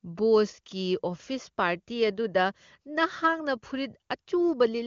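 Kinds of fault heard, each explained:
No technical faults can be heard in the speech, which passes through the AMR wideband (HD Voice) path at a rate high enough to leave at most faint coding traces.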